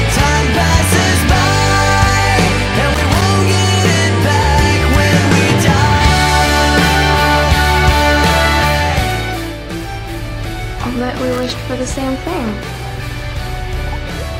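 At 2.94 to 3.22 s and again at 11.32 to 11.55 s there is loose connector crackle. A worn or dirty contact intermittently breaks the signal path, chopping the audio, heard as short, irregular bursts of scratchy crackle lasting roughly a quarter second each.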